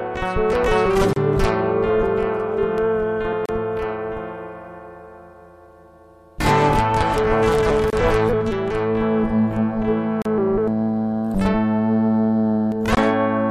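Short dropouts open at 1.13, 3.46, 7.90, 10.22 and 12.95 s, lasting about 32, 33, 27, 35 and 21 ms: a gap at a join of encoded pieces. Untrimmed encoder start delay and final-frame padding leave silence between segments, with smeared edges before the sound resumes.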